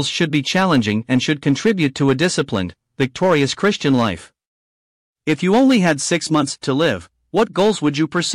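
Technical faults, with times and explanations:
Nothing stood out on listening to the speech in this clip.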